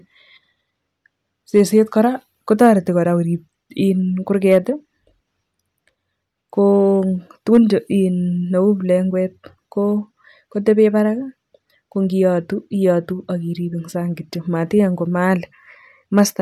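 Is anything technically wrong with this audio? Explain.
Yes. The speech has hard clipping on its loudest moments, five times: 1.57 to 1.79 s, 2.53 to 2.70 s, 4.52 to 4.57 s, 7.53 to 7.57 s and 16.18 to 16.21 s. The peaks there exceed what the signal chain can pass by about 1 to 3 dB, so their tops are sliced flat. Those squared-off crests generate harmonics high in the spectrum, heard as brief crackle on the peaks.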